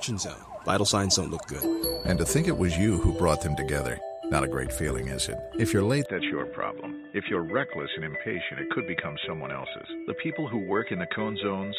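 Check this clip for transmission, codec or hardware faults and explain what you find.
One fault is present. From 6.06 s to the end, the input likely switched to a poorer device. Everything above 3.8 kHz vanishes, the sound turns dull and boxy, and the level drops about 5 dB with no gap.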